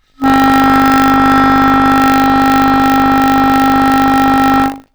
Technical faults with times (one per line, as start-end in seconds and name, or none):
0.00-4.94 buffer tearing